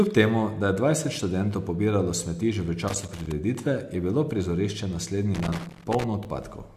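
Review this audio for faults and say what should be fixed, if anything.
Loose connector crackle appears from 2.88 to 3.32 s, right after "pobiralo smeti že v", and again from 5.34 to 6.04 s, after "bilo prizorišče". A worn or dirty contact is making and breaking as it moves, chopping the speech into irregular bursts of scratchy crackle. Cleaning or replacing the cable and connector, and securing it so it cannot shift during recording, would prevent this.

An overlap between stream segments occurs at 6.25 s, where two adjacent segments' time stamps overlap. Trimming that overlap removes a sliver of audio that was never duplicated, so the waveform jumps and a brief click or skip is heard at the boundary after a 6.0 s segment. Generating segment time stamps so each segment begins exactly where the previous one ends would prevent this.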